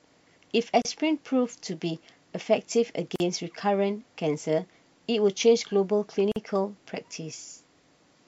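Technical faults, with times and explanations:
0.82–0.85 s, 3.16–3.20 s and 6.32–6.36 s: gap at a join of encoded pieces. The speech drops to silence for about 32 ms, 43 ms and 45 ms, then resumes exactly where it stopped. The sections were encoded separately and spliced without trimming, so each join keeps one section's padded final frame and the next section's encoder start-up delay. The codec smears the abrupt edges of each hole.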